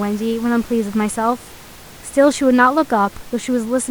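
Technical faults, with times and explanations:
Nothing technical stood out on listening, with only the room's own background noise sitting about 23 dB below the speech.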